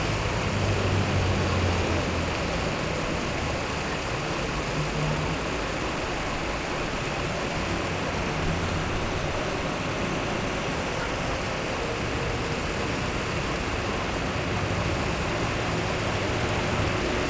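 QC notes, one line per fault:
Nothing to log here; the sound came over a G.722 call path with nothing above 8 kHz, and that band limit is just how that link is meant to work.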